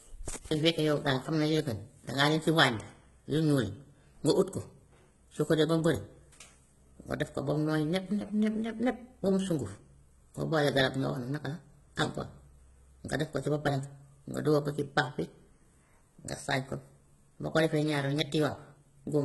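From start to finish the speech sits under a hard ceiling, with nothing above about 11.8 kHz, and it carries the smeared, watery texture of very aggressive compression. The likely cause is low-bitrate audio saved at a high bitrate: the damage points to a 16 kbit/s-class HE-AAC source, later re-encoded as a generous MP3. Unlike a plain low-bitrate MP3, the final encode adds almost nothing of its own; every artefact and the cut-off were inherited from the earlier encode.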